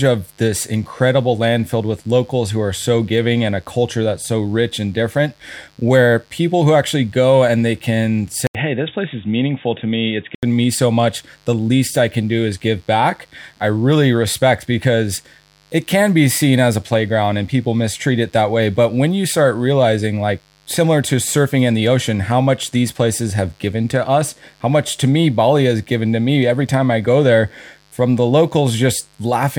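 A dimmer, rectifier or unshielded cable is letting 50 Hz mains switching spikes into this speech recording for its whole length, producing mains buzz: a steady, raspy tone built from harmonics of 50 Hz, sitting roughly 40 dB below the speech. From 8.47 s, right after "go and they can", the input likely switched to a poorer device, such as another microphone or a headset's call profile. There is an 80 ms gap at the switch, and then nothing above 3.8 kHz gets through, so the voice turns dull and boxy. A faint new background noise appears, while the level stays about the same. Full clarity returns at 10.43 s, just before "me so much the".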